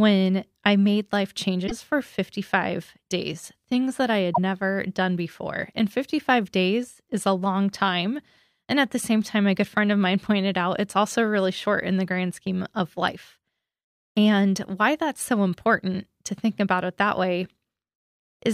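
A speech clip with two brief glitches, from 1.66 to 1.72 s and from 4.33 to 4.38 s, where the sound skips forward. Each lasts about two 26.1 ms frames. The likely cause is a broken MP3 bit reservoir: frames are missing, so the next frame decodes borrowed bytes from the wrong place. A plain dropout would leave only silence, but here the sound jumps ahead.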